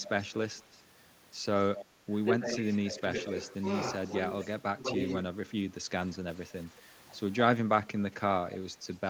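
From 0.06 to 0.79 s, a faint delayed copy of the speech trails it by about 220 ms. It sits about 15 dB down. This is echo leak, likely from a far-end loudspeaker whose echo canceller let some sound through. A short burst returns from 1.75 to 1.85 s, louder at about 10 dB down.

Between 2.07 and 3.36 s, the speech dips in patches totalling about half a second, by up to around 10 dB. This is speech suppressed in double talk, likely the canceller turning down its own talker along with the loudspeaker echo while the two overlapped.

The echo leak comes back from 4.05 to 4.46 s, again about 15 dB down with the same delay of roughly 220 ms.

From 4.6 to 5.08 s, speech suppressed in double talk recurs as a shallower dip of about 5 dB, lasting some 200 ms in all.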